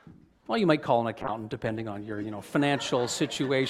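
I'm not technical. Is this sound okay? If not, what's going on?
No. From 1.23 to 2.49 s, a call bitrate drop squeezes the sound into far less data, so it turns rough and muffled before recovering.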